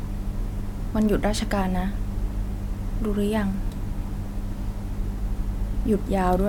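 Nothing in this speech recording stands out as a technical fault, so there's no problem here worth pointing to.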